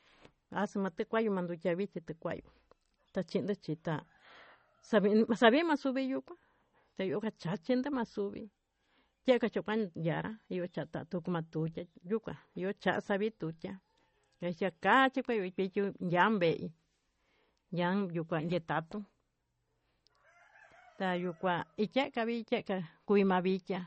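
From start to finish the speech has a watery, swirly quality and nothing above about 8.4 kHz, so the top end sounds dull. That's likely MP3 compression starved of bits, fitting roughly 32 kbps: treble is cut and weak detail flickers between frames.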